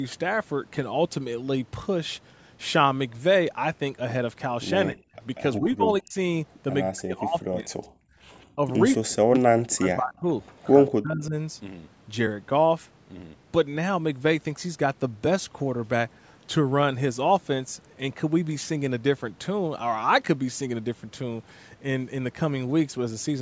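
Speech with the voice dropping out in chunks at 4.9 to 5.16 s, 5.6 to 6.17 s, 6.91 to 7.86 s, 8.53 to 8.61 s, 8.95 to 10.25 s and 10.96 to 11.34 s, by roughly 40 dB in most and about 25 dB in the second. This is most likely speech suppressed in double talk: the echo canceller, hearing loudspeaker sound while this side talked, turned the talker down along with the echo. Between 8.14 and 8.19 s the background is gated by the echo canceller, with only the room sound dipping by about 16 dB for a moment. What separates it from the double-talk cuts is that no voice is lost, just the ambience, before it returns. From 10.47 to 10.91 s a delayed copy of the voice comes back 188 ms late, around 20 dB below the speech. This is likely echo leak, where loudspeaker sound the canceller failed to remove was sent back. Unlike the suppression faults, it adds a second, trailing voice instead of taking level away.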